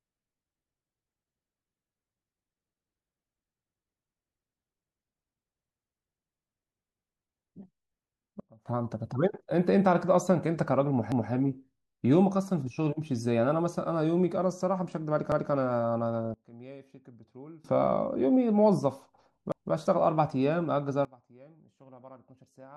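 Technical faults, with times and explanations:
8.40 to 8.66 s: sudden gain jump. The speech and its background noise drop together by about 22 dB in one step, then return at the same abrupt edge. The likely cause is a gain setting applied without a ramp, which makes the level change instantaneous rather than smooth.
11.12 to 11.32 s, 15.32 to 15.52 s and 19.52 to 19.72 s: overlapping chunks. Every 4 s a 200 ms stretch of speech plays twice, producing a brief stutter at each join. The audio is being handled in 4-second chunks that each begin before the previous one finished.
16.34 to 17.64 s and 21.05 s to the end: sudden gain jump. Speech and noise fall together by about 23 dB and about 24 dB respectively, with no fade in or out. Again the likely cause is a gain change applied from one sample to the next without any ramp.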